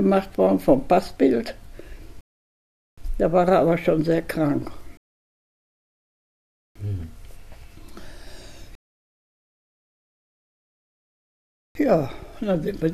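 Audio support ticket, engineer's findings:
Rebuffering stall, three times: 2.21–2.98 s, 4.97–6.76 s, 8.75–11.75 s. Playback drops to silence, then resumes exactly where it stopped. Nothing lost, time added: 0.77 s, 1.78 s, 3.0 s. Player buffer ran dry. Delivery not keeping pace with playback.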